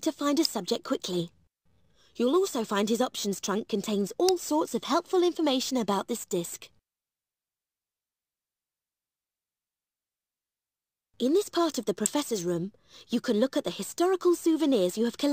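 At 0.45 s, 4.29 s and 12.06 s a sharp snap sits on top of the sound, each one over within a few milliseconds and peaking at about -10 dBFS. These are likely electrical switching spikes, where a nearby switch, motor or static discharge arcs and the audio line picks it up. On a waveform each shows as a thin isolated spike. A spectrogram shows a narrow vertical stripe running across the whole frequency range.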